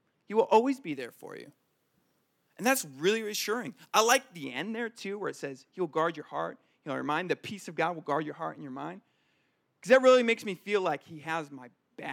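Speech that turns thin, bright and sibilant from 0.92 to 4.44 s, between "will always be" and "end there too where". That is pre-emphasis left on: the treble lift was never undone by de-emphasis, leaving 10 kHz about 13 dB above 1 kHz, which fits a 75 µs FM curve.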